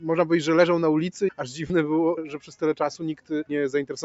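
Throughout the clip, held parts of the sound sink and swell while attacks stay intact, so the level pumps and thins by around 5 dB. This is a noise suppressor applied to music or sounds: a speech-tuned suppressor mistakes steady tones and decays for noise and pulls them down.

From 1.67 to 1.70 s there is a brief noisy smear where tonal detail dissolves for 30 ms. These are lost LE Audio frames, consistent with roughly three dropped LC3 frames. The decoder filled the gap by reusing the previous spectrum with randomised signs.

From 2.34 to 2.59 s, and again from 3.15 to 3.31 s, the sound drops away sharply, by about 11 dB and then about 12 dB, with its sustain cut short. Both are sound cut by the noise suppressor, which judged these steady stretches to be noise and attenuated them harder than the surrounding material.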